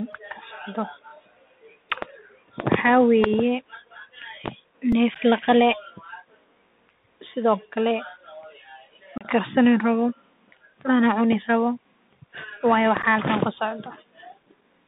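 Throughout, the speech passes through a Bluetooth CVSD headset codec. The line carries only about 150 Hz to 3.7 kHz. A one-bit delta coder at 64 kbps tracks the waveform with an adapting step. Here the damage is plain. Sibilants turn scratchy, and a granular hiss sits under everything.

At 1.90 s there is a repeated buffer. Fresh audio arrived late, so the same 2.9 ms slice played three extra times. That fits a 128-sample buffer. It sounds like a brief buzzy click. At 4.92 s, just before "neef laqale", it happens again, with two repeats.

From 9.18 to 9.26 s comes unconcealed Bluetooth headset packet loss. Several voice packets vanished, leaving about 30 ms of hard-edged gap. The speech drops out abruptly and resumes quieter for a moment. At 13.02 s a shorter hole of about 11 ms chops the sound.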